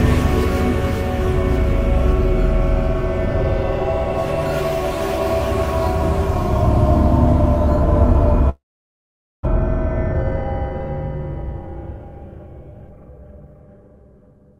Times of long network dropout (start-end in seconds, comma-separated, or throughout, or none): 8.49-9.47